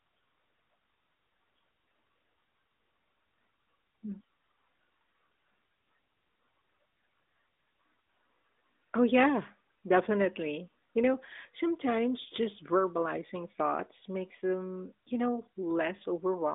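No technical faults can be heard anywhere in the recording. The speech comes through an AMR narrowband mobile codec, so it carries only a telephone band of roughly 250 Hz to 3.7 kHz with nothing above 3.8 kHz, and the light coding texture points to the highest-quality 12.2 kbps mode.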